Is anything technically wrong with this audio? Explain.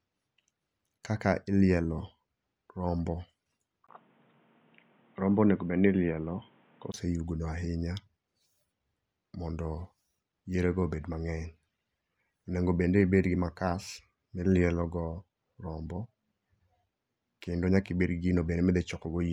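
Yes. From 3.87 to 6.94 s the input likely switched to a poorer device, a narrower capture path that passes nothing above 3.8 kHz. After a 20 ms gap the speech turns dull and boxy at much the same level, with new background noise roughly 35 dB below it, then clears again.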